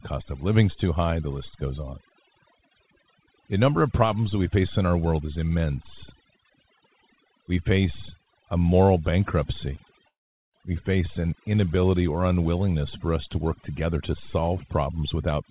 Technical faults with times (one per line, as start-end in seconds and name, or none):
0.00-15.50 overdone noise removal
10.08-10.56 call audio freeze